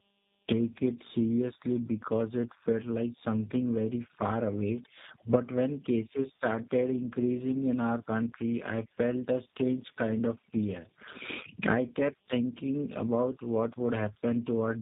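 Tandem speech coding throughout: two low-rate speech coders in a row, consistent with GSM then G.729A, compound their damage into rough, warbly, muffled speech, empty above 3.8 kHz.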